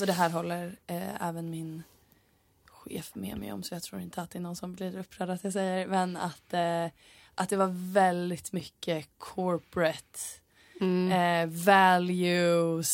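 At 8.60 s a block of digital silence replaces about 5 ms of the speech with zeros; the abrupt cut and return produce a sharp tick.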